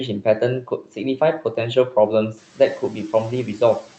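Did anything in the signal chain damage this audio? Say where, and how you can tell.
Yes. The noise suppressor in the call processing misjudged speech as noise and pulled it down twice, from 0.63 to 0.98 s by up to about 12 dB and from 2.79 to 3.14 s by up to about 9 dB, in each case for roughly 150 ms in total. The second cut follows the room noise rising by about 12 dB near 2.5 s. Quiet consonants and word endings sink into the background and sound swallowed.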